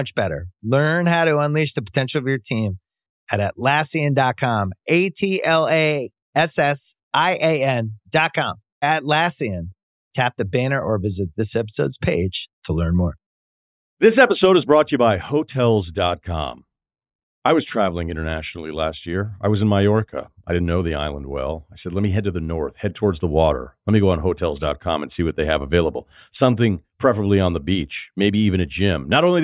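No technical faults can be heard anywhere in the recording.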